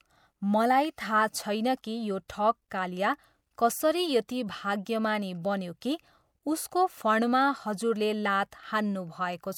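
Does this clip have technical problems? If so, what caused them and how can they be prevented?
Yes, there's pre-echo at 2.28, 4.28 (right after "कालिया कसरी"), 5.81 and 8.51 s (after "उसको फणमा हजुरले"): a brief hiss of roughly 11 to 14 ms smears each attack, as codec noise fills the quiet before it. A higher bitrate or block switching prevents it.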